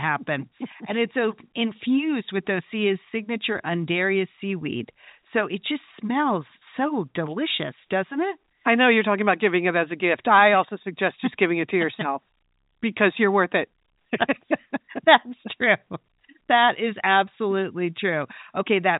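No technical faults are audible.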